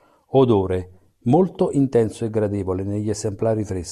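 Nothing technically wrong can be heard in the signal of this short speech recording.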